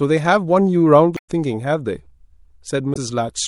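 Throughout, the speech sounds watery and swirly with dulled treble, likely MP3 compression at a bitrate that fits 64 kbps, where the encoder drops weak frequency detail. From 1.14 to 1.29 s and again at 2.93 to 2.97 s, damaged data in the compressed stream produces brief glitches as the decoder loses sync and searches for the next frame header.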